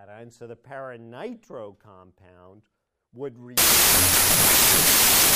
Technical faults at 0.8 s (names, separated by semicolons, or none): none